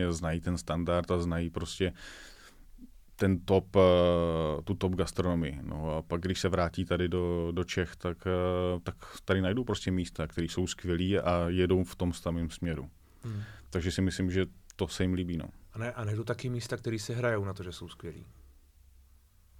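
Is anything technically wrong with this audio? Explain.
No, nothing is technically wrong with this audio.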